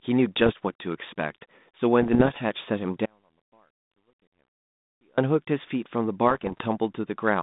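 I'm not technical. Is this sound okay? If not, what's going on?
No. This is speech over a digital phone-style link, and there are bit errors on an ADPCM link: scrambled data confuses the decoder, so you hear pops and rough crackly bursts at 0.36 to 0.52, 2.02 to 2.38 and 6.27 to 6.63 seconds. There's also an audio dropout to a faint residue: the signal was likely lost in transmission, so from 3.06 to 5.18 seconds the speech suddenly vanishes, leaving only a very faint trace before snapping back.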